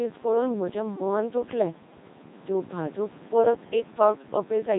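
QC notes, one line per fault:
Throughout: Codec 2 vocoder. The speech has a robotic, buzzy quality with heavy damage, because the decoder rebuilds it from sine waves driven only by pitch, voicing, energy and a coarse spectral envelope, discarding the original waveform. The artefacts fit a rate of roughly 2.4 kbit/s.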